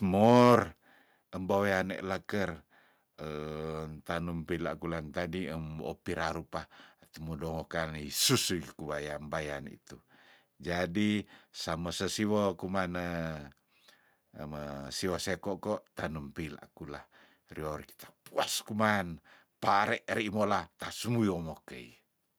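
Microphone overload at 0.23 to 0.56 s in this speech clip: the peaks run about 4 dB past the converter's ceiling, likely from excessive input gain, so the tops of a few percent of samples flatten into harsh crackle.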